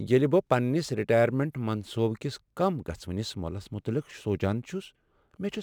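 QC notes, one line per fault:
Throughout, sample clock jitter: the converter's clock wanders by a few microseconds, so each sample lands slightly early or late, most harmfully on steep waveform slopes. This leaves a faint hiss, roughly 40 dB below the speech, that grows on loud, bright syllables and disappears in pauses.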